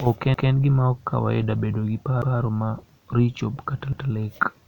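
At 0.34, 2.22 and 3.93 s the speech stutters with a repeated buffer. Fresh audio arrived late, so the last 0.17 s piece, which fits an 8192-sample buffer, plays once more with a hard join. Unlike a dropout, nothing goes silent or missing.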